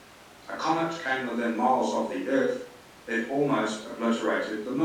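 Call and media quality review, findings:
No faults found in the speech recording. Nothing here needs a ticket.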